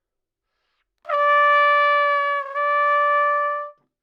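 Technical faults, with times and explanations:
No technical faults detected anywhere in the audio.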